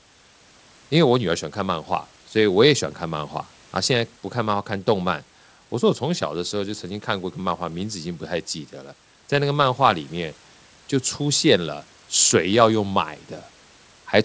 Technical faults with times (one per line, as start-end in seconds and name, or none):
none